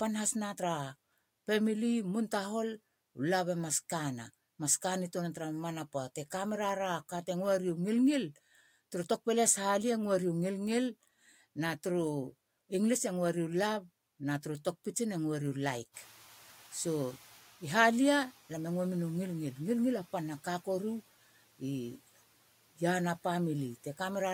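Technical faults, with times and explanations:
15.93–17.41 s, noise suppressor catching up: just after "u laik" the room noise jumps by about 16 dB around 16 s and leaks through before sinking by about 6 dB over 1.48 s as the noise estimate adapts. Unlike gate pumping, it fades once rather than repeatedly.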